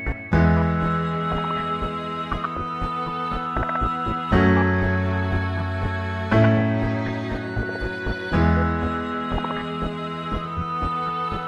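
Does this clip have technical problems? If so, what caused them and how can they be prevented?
No, nothing in the audio points to a technical fault, so there is nothing to prevent.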